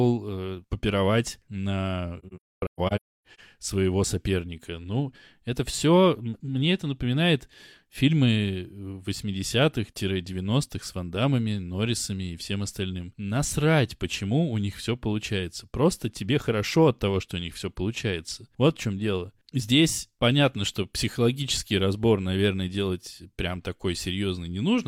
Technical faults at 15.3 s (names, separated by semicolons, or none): none